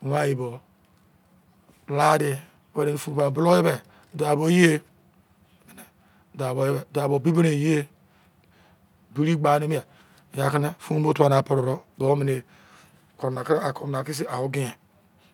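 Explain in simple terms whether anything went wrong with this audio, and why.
Nothing went wrong with this speech recording: the signal stays steady and intact throughout, with no sudden breaks, glitches or changes in level at any point.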